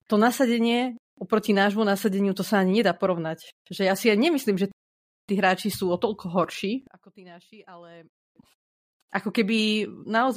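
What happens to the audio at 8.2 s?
At 8.2 s the speech sits inside a collapse from 6.87 to 8.36 s, just after "sú o toľko horší": the centred sound drops about 25 dB to a faint residue rather than true silence, likely one channel inverted cancelling the shared signal in mono.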